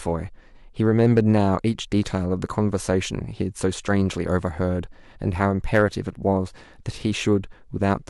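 Hard clipping at 0.99–1.40 s and 5.43–5.83 s: peaks overdrive the stage by about 4 dB and 3 dB, are flattened, and crackle on peaks.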